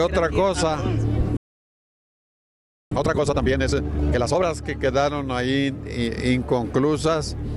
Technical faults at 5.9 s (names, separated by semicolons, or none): none